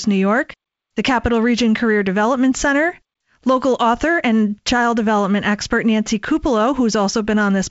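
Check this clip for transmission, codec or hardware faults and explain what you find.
No transmission, codec or hardware faults can be heard in the speech. It has the sound of G.722 wideband telephone coding at 56 kbit/s, with nothing above about 7.7 kHz and only a light coding texture from the two-band ADPCM scheme.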